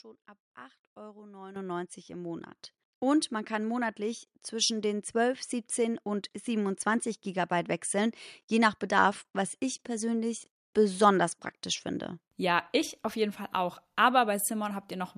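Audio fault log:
1.56 s and 2.58 s: microphone volume stepped up. The speech and the background noise jump in level together, by about 11 dB and then about 6 dB, because the call software judged the input too quiet and raised the device's input gain in single steps.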